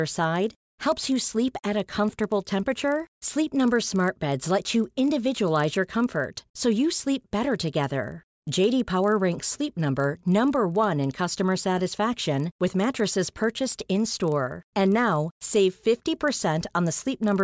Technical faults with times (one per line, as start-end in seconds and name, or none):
0.00-17.44 resampler restarted on every block